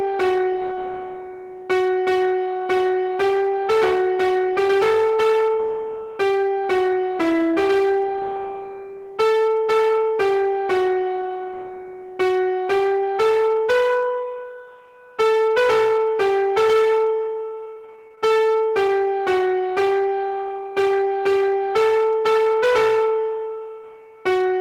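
Hard clipping runs through the whole clip. The signal is driven about 12 dB past what a stage in the chain can pass, so every peak is sliced flat, and roughly one sample in seven sits on that ceiling. The flat tops add high harmonics, so loud moments carry a harsh, gritty fuzz rather than the rounded thickening of soft saturation. Because the fuzz rises and falls with level instead of appearing in isolated bursts, it points to overload rather than a fault in the transmission.

From 17.55 to 18.32 s there is repeated packet loss with a robotic sound. The stretch breaks into what sounds like about a dozen short holes, the longest only 23 ms, and each is filled by repeating or extending the preceding sound. About 183 ms of this span is concealed in that way, roughly a quarter of it. The effect is choppy, with small pieces missing. Unlike the clipping, it is confined to this window and independent of loudness, and it is a rapid chain of patched gaps rather than a single clean dropout.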